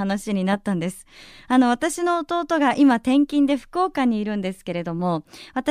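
No technical faults are audible.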